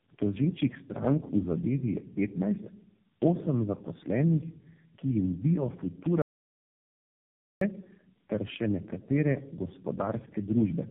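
Tandem speech coding runs through the whole clip. The sound points to three passes through a low-rate AMR-NB coder, linked by G.711 stages. Each pass re-codes the last one's errors. Speech sounds rough, muffled and warbly, with nothing above 3.6 kHz.

At 6.22 s the audio drops out to silence until 7.61 s. The gap lasts about 1.4 s and is silent, with no room tone. The input was likely lost while recording continued, and whatever was said then is gone.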